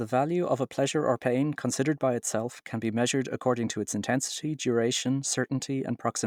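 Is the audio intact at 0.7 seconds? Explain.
Yes, the audio is intact at 0.7 seconds, with no fault audible at that moment.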